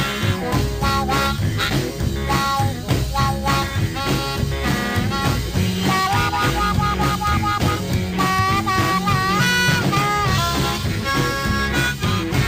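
There are no technical faults to describe, so there is nothing to place in time order.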